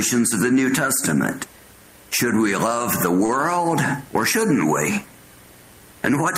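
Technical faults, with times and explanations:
3.25 to 3.32 s, short stall from a late packet: a packet didn't show up on time, the jitter buffer ran dry, and the receiver covered the gap by stretching the last bit of sound for about 36 ms until the packet landed. Then it carried on from exactly where it left off, so nothing's actually lost. You just hear a brief held smear with a slight buzz or dip, and everything after runs 36 ms later than before.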